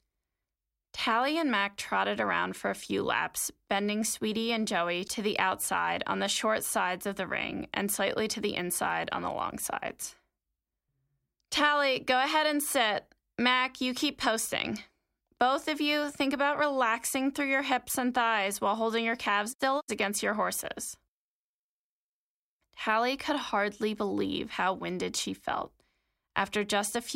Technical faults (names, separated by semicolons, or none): none